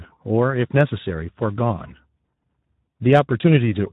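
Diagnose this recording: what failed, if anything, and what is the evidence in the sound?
The codec stage failed. Speex codec damage is plainly audible across the whole speech clip: the voice sounds hoarse and noisy, and nothing remains above about 3.8 kHz. CELP coding at this strength, which fits roughly 11 kbps, leaves too few bits for the excitation, so voicing turns rough. A simple low-pass filter would dull the top but keep the voice clean. This grainy excitation points to the codec instead.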